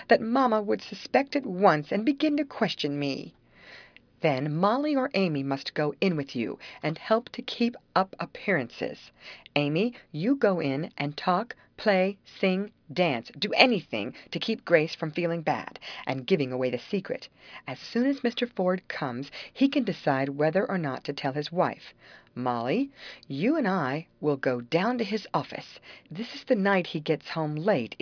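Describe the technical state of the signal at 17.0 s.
At 17.0 s the signal is intact, with no dropout, distortion, glitch or other fault to be heard.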